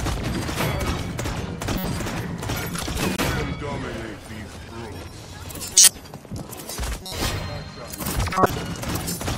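At 1.78–1.84, 3.15–3.19, 5.74–5.88, 7.03–7.13 and 8.34–8.50 s, a corrupt frame decoded: damaged compressed frames played anyway, misplacing energy into brief chirps or noise bursts. The 5.74 s burst is loudest. Unlike a dropout, sound is added rather than lost.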